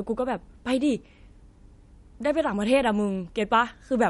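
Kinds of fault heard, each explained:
MP3 compression: The encoder has likely been starved of bits, which fits a low bitrate near 48 kbps for speech. To save data it drops everything above a fixed point and discards quieter frequency detail it judges unimportant. Here the speech has nothing above 11.2 kHz, so the top of the spectrum is simply gone, and the coding damage is plainly audible across the whole clip, not confined to any one moment.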